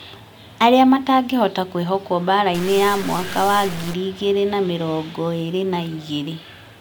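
From 2.54 s to 3.94 s the speech turns distorted. The sound is a stuck bit. One bit of each sample no longer follows the signal and holds a fixed value. Roughly half the samples land off by that bit's weight, in a pattern set by the waveform. That gives a distortion over the speech. Gaps inside the stretch fill with noise. The likely cause is a broken data line or converter.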